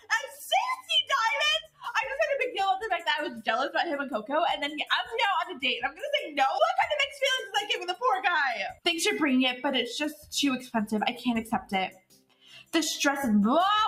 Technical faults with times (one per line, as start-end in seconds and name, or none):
0.00-13.88 noise suppressor applied to music or sounds
0.00-0.42 sound cut by the noise suppressor
0.78-1.11 sound cut by the noise suppressor
1.62-1.88 sound cut by the noise suppressor
10.13-10.32 sound cut by the noise suppressor
11.89-12.74 sound cut by the noise suppressor